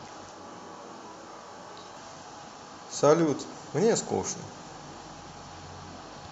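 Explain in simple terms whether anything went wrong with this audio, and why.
From 0.32 to 1.96 s the speech turns suddenly hollow, roomy and thin, with faint background noise, then snaps back: likely a switch to a distant microphone.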